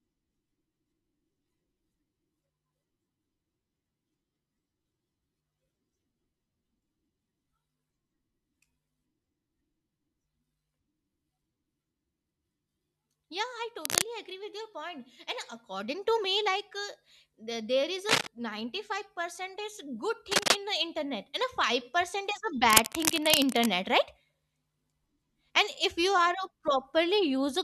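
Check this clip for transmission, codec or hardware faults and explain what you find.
Cable scratch noise, most likely from a worn cable or connector being moved, makes its contact resistance fluctuate rapidly. Dense, uneven bursts of scratching cut over the speech at 13.80–14.02 s, 18.09–18.27 s, 20.31–20.56 s and 22.69–23.70 s, roughly as loud as the speech or slightly louder.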